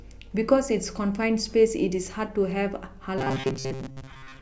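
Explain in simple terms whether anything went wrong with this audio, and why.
From 3.18 s to 4.41 s the speech turns into a rigid, metallic buzz near 133 Hz. This is robotic sound from repeated short buffers, likely from re-playing a 7.5 ms snippet while most real audio was skipped.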